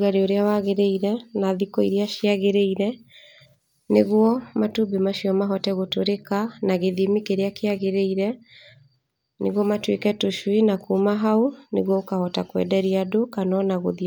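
Listening through the speech, nothing stood out as a technical fault at any point.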